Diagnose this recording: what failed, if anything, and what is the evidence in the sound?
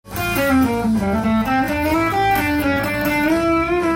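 From 1.0 s to the end of the clip the sound runs at about 0.69 times its earlier pace with unchanged pitch, a time-stretched section that likely comes from a stretching step in processing after capture. Short segments are repeated to lengthen the material, so from 1.0 s onward it drags. On a spectrogram the harmonics stay at the same heights but smear sideways, and the waveform shows duplicated short cycles.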